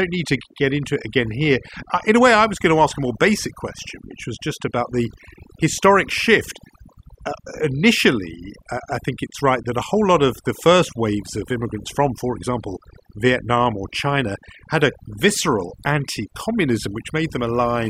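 Throughout the recording, overdone noise removal has cut individual frequency bands whenever they sat close to the noise estimate, taking quiet parts of the voice with them. Unlike a simple gate, the pauses keep twinkling specks.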